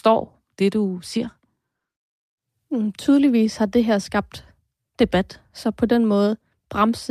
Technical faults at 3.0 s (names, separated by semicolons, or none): none